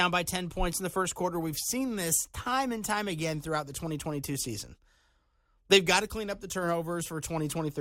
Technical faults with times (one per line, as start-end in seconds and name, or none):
none